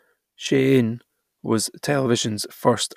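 No technical faults are audible.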